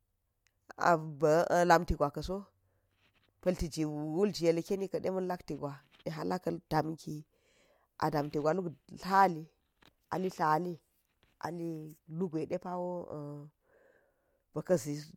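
No technical faults can be heard anywhere in the speech recording. There is nothing here to place on a timeline or trace to a cause.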